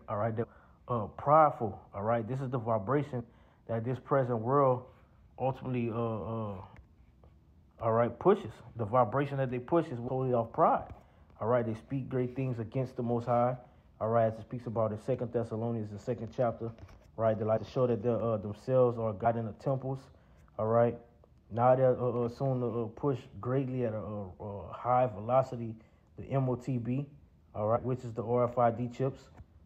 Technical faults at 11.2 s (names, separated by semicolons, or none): none